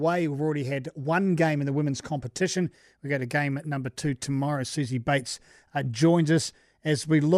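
No technical faults can be heard anywhere in the recording.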